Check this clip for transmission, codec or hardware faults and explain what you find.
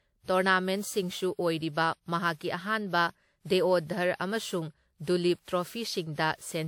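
One codec fault runs through the whole speech recording: generation loss. It lasts from start to finish. The sound is swirly and hollow, with smeared attacks and a watery haze. That is more damage than a single encode at a moderate rate would leave. The likely cause is repeated decoding and re-encoding, around seven passes, through a WMA-style codec near 96 kbit/s. Each pass quantises on a shifted frame grid, so noise accumulates. Bandwidth still reaches 20 kHz.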